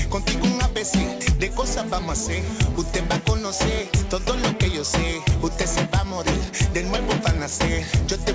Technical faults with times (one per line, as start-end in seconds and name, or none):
none